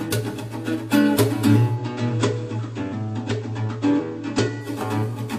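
From 1.67 to 4.71 s, faint hiss appears and level drops about 3 dB: digital radio blending to analogue FM over 120 ms.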